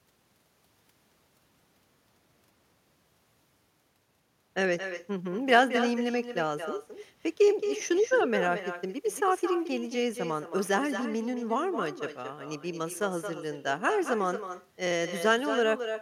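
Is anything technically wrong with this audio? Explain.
Yes. Echo with no canceller runs through the clip. The far end's loudspeaker feeds its microphone and nothing removes it, so the speech returns after the round trip, roughly a fifth of a second late and about 9 dB quieter. It sounds like a thin shadow trailing every phrase.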